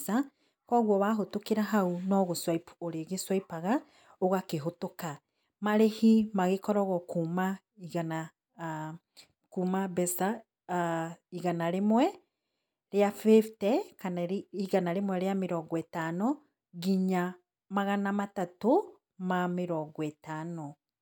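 Speech recording with nothing technically wrong with it.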